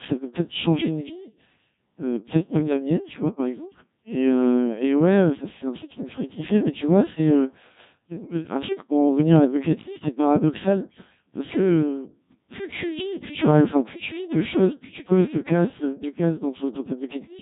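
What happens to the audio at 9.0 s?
At 9.0 s the speech is still going through the Codec 2 vocoder, which affects the entire clip. Instead of keeping the waveform, the decoder rebuilds the voice from sine waves using only pitch, voicing, energy and a spectral envelope. That makes the speech sound robotic and buzzy, and the heavy codec damage suggests a very low rate of around 1.3 kbit/s. Nothing is heard above about 3.8 kHz.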